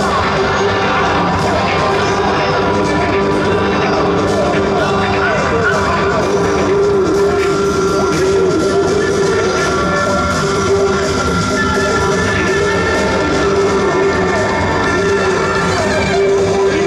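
No technical faults can be heard anywhere in the recording; the signal stays steady and intact throughout.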